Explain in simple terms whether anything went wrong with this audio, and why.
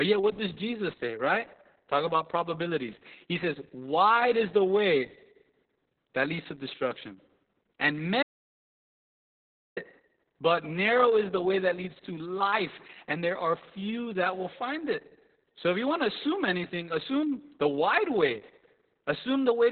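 The speech was squeezed through Opus voice compression at a very low data rate, keeping only a narrow telephone-like band with nothing above about 4.5 kHz. The whole clip sounds muffled, hoarse and a little robotic, with the crisp edges of consonants gone.

There is also an audio dropout to silence from 8.23 to 9.77 s, right after "leads to destruction and". The input was likely lost for about 1.5 seconds, so the sound cuts to dead silence with no room noise, and whatever came next is missing.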